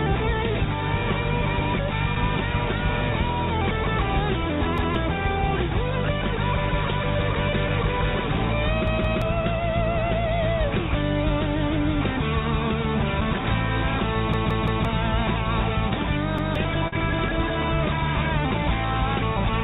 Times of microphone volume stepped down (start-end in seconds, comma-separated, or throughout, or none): none